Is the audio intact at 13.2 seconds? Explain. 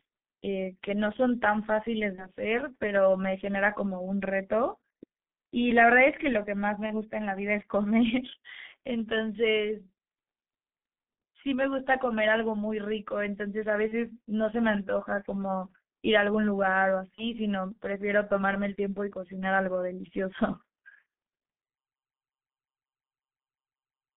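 No. G.723.1 codec damage runs throughout: audio confined to 200 Hz to 3.6 kHz, fitting roughly 6 kbit/s, with slow 30 ms model updates adding hoarseness and smeared consonants, unlike simple filtering.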